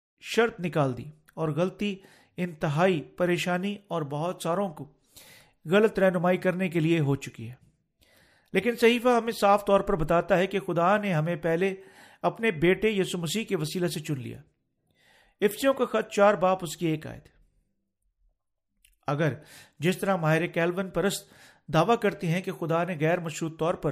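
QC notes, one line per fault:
Nothing stood out on listening to this speech clip, apart from a smooth fade-in over the first 0.22 s.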